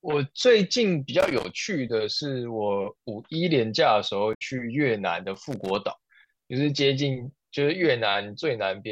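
At 1.20 to 1.50 s, an irregular burst of scratchy crackle cuts through the speech. This is loose connector crackle. A worn or dirty contact is making and breaking as it moves, chopping the signal into fragments. Any DC on the line turns those breaks into pops.

At 4.33 to 4.42 s comes a short glitch. This is damaged data in a compressed stream. Corrupted bytes left the decoder unable to read those frames, so it lost sync and hunted for the next valid header.

At 5.34 to 5.76 s the loose connector crackle returns. Again the contact chops the signal irregularly, producing a rough burst of scratching.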